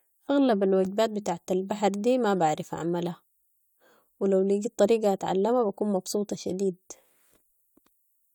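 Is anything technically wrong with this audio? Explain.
Yes. From 0.25 to 8.31 s, clock slip clicks tick faintly about every fifth of a second, roughly fifty of them. Two unsynchronised clocks likely differ by around 100 ppm, so one sample is dropped or repeated at each slip. A spectrogram shows thin vertical broadband lines, and the waveform shows tiny step discontinuities.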